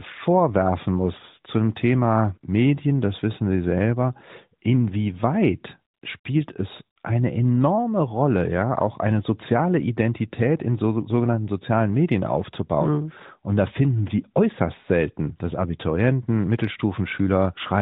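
Just after "selber inwieweit", AMR comfort noise replaces the signal from 5.94 to 6.02 s, then again from 6.20 to 6.24 s, before "es eine enorme". The codec judged these gaps silent and sent no speech frames. The receiver filled them with smooth synthetic noise. The real background drops out briefly, twice.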